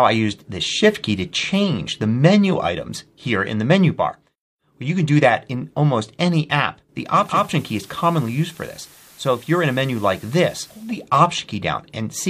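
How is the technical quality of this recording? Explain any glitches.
The recording has one clear glitch. From 7.01 s to 11.09 s a steady hiss rises under the sound, roughly 25 dB below it, and the level drops by about 3 dB. Both changes ease in over about half a second and ease back out at the end. This is digital radio blending to analogue: the receiver lost its digital signal and cross-faded to the station's FM broadcast, with its noisier carrier and different level, then returned once the digital stream recovered.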